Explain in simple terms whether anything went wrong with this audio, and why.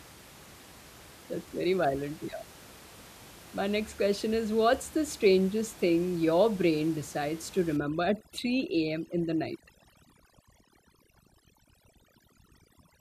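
Yes, one thing went wrong. From about 7.77 s to the end, overdone noise removal kicks in: a noise reducer pushed too hard is switching off bits of sound it mistakes for background hiss, so the background drops and breaks up into little twinkling specks in the near-silence between phrases. The room noise underneath is just part of the recording.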